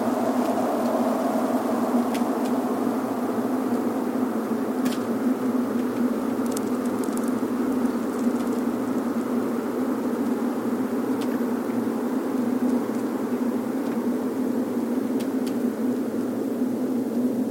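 The audio has low bit depth with dither throughout. Quantisation consistent with about 7 bits turns rounding error into a constant, even hiss roughly 25 dB below the signal.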